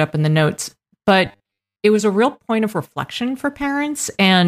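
Robotic sound from repeated short buffers runs from 1.26 to 1.83 s. The speech collapses into a rigid, metallic buzz at 100 Hz, likely because audio arrived too slowly and the player kept looping the last 10 ms, skipping most of the real signal.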